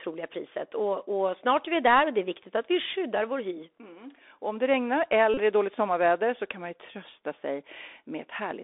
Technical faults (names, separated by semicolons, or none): Bluetooth CVSD headset codec; Bluetooth headset packet repeated